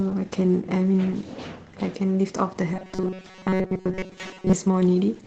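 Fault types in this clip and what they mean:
Opus voice compression: Present throughout the speech, this is the Opus codec running its SILK linear-prediction mode at about 12 kbps in 20 ms frames. At that rate the band is held to wideband, so nothing above roughly 8 kHz survives, and the excitation is coded coarsely. The result is plainly audible: the speech sounds muffled and slightly hoarse, with a faint synthetic, robotic edge where fine detail in the signal has been approximated rather than kept.
Robotic sound from repeated short buffers: From 2.74 s to 4.53 s the speech turns into a rigid, metallic buzz that still roughly follows the original. The buzz sits at 188 Hz, which points to a buffer of about 5.3 ms being replayed over and over. The likely cause is audio arriving too seldom, with playback filling each gap by repeating the last short buffer. Most of the real audio in that stretch appears to be skipped rather than played.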